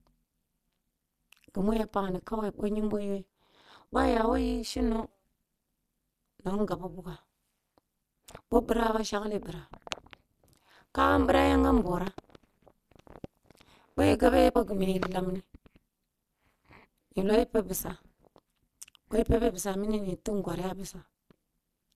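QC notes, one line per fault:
throughout, overlap-add ripple: the speech was rebuilt from windowed frames whose overlap does not sum to a constant gain, so the level swings by about 60 dB at around 200 Hz, once per frame. This deep, fast modulation gives the voice a harsh, robotic buzz.
14.55 s, stream segment skipped: the speech jumps abruptly forward with a brief blip where the continuity breaks. The likely cause is that one segment of the stream failed to load and playback carried on from the next one, leaving a discontinuity.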